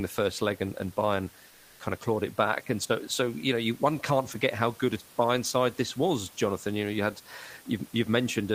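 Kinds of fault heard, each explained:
Comfort noise in place of the background: from 1.47 to 1.79 s the room noise, about 29 dB below the speech, turns into a flat, featureless hiss about 2 dB quieter, likely receiver-generated fill during discontinuous transmission, as with Opus DTX.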